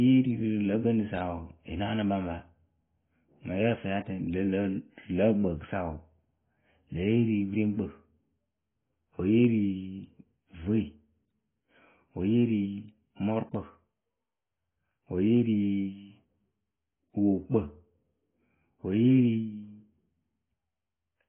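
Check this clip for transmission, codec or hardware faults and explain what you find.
The speech carries AAC compression damage for its whole length. Nothing is heard above about 3.7 kHz, so the sound is dull and muffled. Sibilants fizz and smear. This points to heavy AAC-LC coding, likely at a very low bitrate near 16 kbps, which cuts the band and leaves spectral holes or fills bands with substitute noise.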